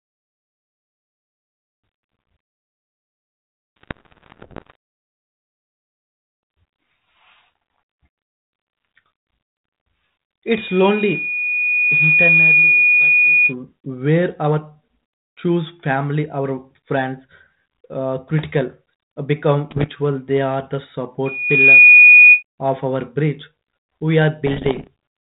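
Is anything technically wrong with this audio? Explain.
Yes, there are two problems in this speech clip.

Bit errors on an ADPCM link hit at 3.77 to 4.75 s, 19.70 to 19.89 s and 24.46 to 24.87 s. With around a percent or two of bits flipped, each error knocks the decoder's step size and prediction off, so you hear pops and gritty bursts with brief jumps in level.

Loudspeaker feedback squeal shows up at 10.47 to 13.54 s and 21.25 to 22.43 s. The mic is hearing its own speaker, and a 2.5 kHz tone runs away. It swells over roughly two seconds to about 10 dB above the speech the first time, then in about half a second to about 15 dB above it the second time.

The underlying band-limited ADPCM sound, which points to 32 kbit/s G.726, is just light codec texture rather than a fault.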